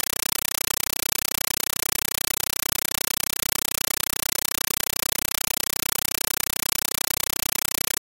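A Dolby Digital (AC-3) bitstream has reached the output as if it were ordinary PCM samples, so nothing decodes it: the compressed stream is played as audio for the entire clip. Each frame of the 384 kbps stream arrives as an 8 ms burst of dense noise followed by silence, repeating 31.25 times a second. The result is harsh, very loud, rattling static that replaces the intended sound throughout.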